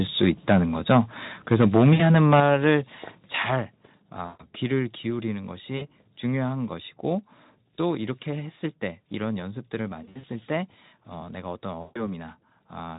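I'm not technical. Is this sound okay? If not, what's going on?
No, there are a few problems. First, microphone overload: around 0.23 to 0.56 s and again from 1.51 to 2.4 s, the loudest bits sound harsh and crackly, likely because the mic input was set too high.

Right at 2.4 s, just after that crackly stretch, the microphone volume stepped down. The voice and background suddenly get quieter in one jump, likely the call software turning the mic down on its own.

Then there's VoIP packet loss concealed by the speech codec, at 1.93, 4.26, 5.77, 10.03 and 11.81 s. Bits of audio went missing, from 40 ms up to 140 ms at a time. The Speex codec papered over each gap with a buzzy or fading smear, and the sound stays a bit weak for a moment afterwards. Around 10.03 to 10.25 s the dropouts come in a scattered cluster.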